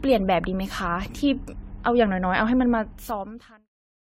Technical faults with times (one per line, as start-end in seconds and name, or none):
0.00-4.17 generation loss